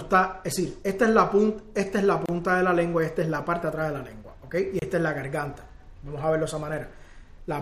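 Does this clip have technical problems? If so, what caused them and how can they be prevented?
Yes. Brief dropouts of about 29 ms at 2.26 to 2.29 s and 27 ms at 4.79 to 4.82 s: a gap at a join of encoded pieces, where encoder start delay and end padding remained. Trim each piece's encoder delay and padding before joining, or encode the material as one continuous file.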